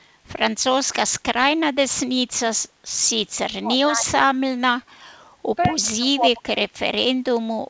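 From 3.59 to 4.15 s the talker sinks by roughly 30 dB, and from 5.67 to 6.96 s it drops again, deeper (around 35 dB) and for about a second in total, over a sound already band-limited to 8 kHz. Both are speech suppressed in double talk, likely because the echo canceller, hearing both sides at once, could not tell this talker from loudspeaker echo and turned everything down.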